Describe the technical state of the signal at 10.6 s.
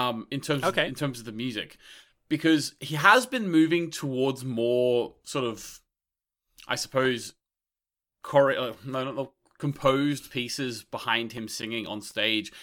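At 10.6 s the speech signal is intact, with no technical fault present at that moment.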